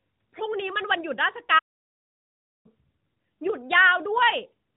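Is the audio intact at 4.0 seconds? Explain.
Yes, the speech at 4.0 seconds runs through the AMR narrowband mobile codec path as it should, with its band limit of about 3.8 kHz and no break, dropout or glitch there.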